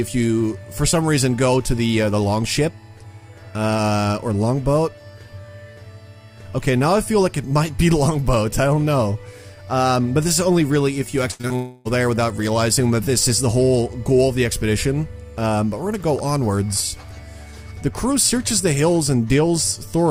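At 11.31 s a burst of packet loss runs to 11.41 s: about 80 ms of audio never arrived, and the receiver extended the last sound and faded it. On a spectrogram, the preceding harmonics or noise stretch flat and dim, then the signal jumps ahead.

Right after, two short concealed packet losses follow, at 11.41 to 11.45 s and 11.47 to 11.52 s, each about 20 ms missing. They sound like quick smears or wobbles, and the waveform shows brief blended patches with slightly smoothed envelopes where the real signal was replaced.

From 11.56 to 11.87 s comes roughly 300 ms with no real audio, likely a long network dropout. The last sound is carried on as a decaying buzz or hiss with no silence reached, visible as a tapering, featureless band before the audio resumes further along.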